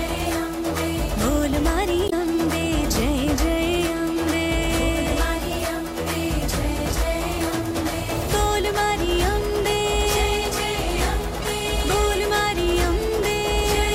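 A brief glitch breaks in at 2.05 to 2.13 s, and a shorter blip at 11.42 to 11.44 s. Both are damaged data in a compressed stream: corrupted bytes garble those frames, and the decoder loses sync before locking onto a clean frame header.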